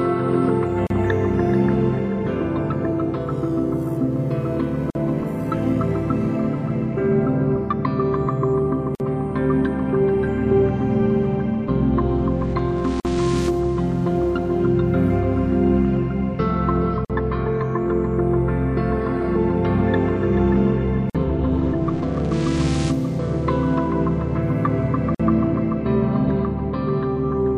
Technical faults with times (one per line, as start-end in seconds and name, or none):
0.87-0.90 gap at a join of encoded pieces
4.90-4.95 gap at a join of encoded pieces
8.95-9.00 gap at a join of encoded pieces
13.00-13.05 gap at a join of encoded pieces
17.05-17.10 gap at a join of encoded pieces
21.10-21.15 gap at a join of encoded pieces
25.15-25.20 gap at a join of encoded pieces